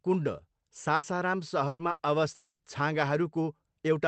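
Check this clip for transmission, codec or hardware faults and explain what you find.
There are two kinds of fault here, both network trouble on a call that's been squeezed through Opus, which cuts off everything above about 8 kHz and sounds like a fairly low bitrate.

Burst of packet loss, three times: 0.95 to 1.06 s, 1.67 to 1.82 s, and 1.91 to 2.02 s. A short run of packets never made it, so the receiver kept stretching the last bit of sound and fading it out. You hear a brief held buzz or hiss of about 80 ms, then 120 ms (the last 30 ms of that is plain silence), then 80 ms. The speech picks up again with that stretch simply gone.

Long network dropout, from 2.35 to 2.62 s. Here the audio stops for about 240 ms. The first part is the same fading buzz as the concealment tries to bridge the gap, but it runs out, and the final 130 ms or so is just silence before the speech comes back with the missing part skipped. 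That pattern most likely comes from the connection stalling for a moment rather than a few isolated packets going astray.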